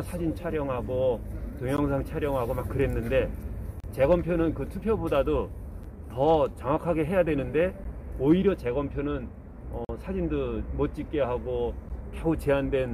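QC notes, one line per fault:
1.77, 3.80–3.84, 5.83, 7.84, 9.85–9.89, 11.89 s, gap between stream segments: hard-edged dropouts of about 9 to 43 ms, landing every 2 s. Neighbouring segment timestamps don't quite meet, so the player pads each seam with silence. Nothing's actually lost.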